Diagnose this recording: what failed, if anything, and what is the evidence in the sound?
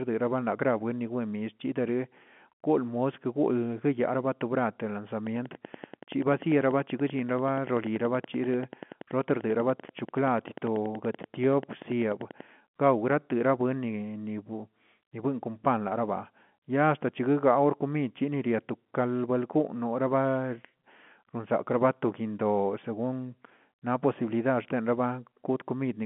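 A train of clicks runs from 5.27 to 12.42 s: roughly seventy near-identical pulses at a steady 10.4 per second, peaking a little above the speech and audible in pauses too. The even spacing points to a likely analogue-wiring fault, with interference from nearby equipment injecting a periodic pulse.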